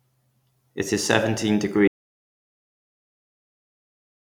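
At 1.88 s, right after "is seventeen", an audio dropout to silence leaves silence with no room tone to the end, likely from a lost input.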